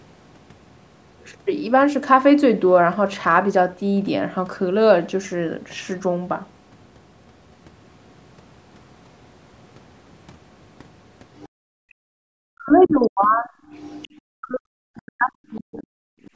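From 11.39 to 11.48 s, the echo canceller likely left residue of the loudspeaker signal in the microphone, so the other side's voice leaks through as a faint scrap, roughly 30 dB below the talker. Right after, from 11.49 to 12.25 s, the background is gated by the echo canceller: it clamps the microphone while the loudspeaker plays, so the room sound drops by up to about 34 dB for around 0.7 s before returning.

From 12.53 to 13.47 s, speech is suppressed in double talk. With both sides talking, the canceller likely could not tell its own talker from the echo and pulled everything down, so the voice dips by as much as about 40 dB in pieces over roughly 0.7 s. Overlapping this, from 12.84 to 14.18 s, the other side's voice leaking through is more prominent, about 20 dB under the talker.

A second double-talk suppression follows from 14.23 to 15.87 s, again cutting the talker by up to about 40 dB across roughly a second of chopped, dipping speech. 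Inside it, a brief leak of the far-end voice appears at 14.95 to 14.99 s, around 30 dB down.

At the end, from 16.15 to 16.34 s, the background is gated again, dropping about 20 dB for around 150 ms. A tiny leak of the other side sits inside that gap at 16.24 to 16.30 s, roughly 35 dB below the speech.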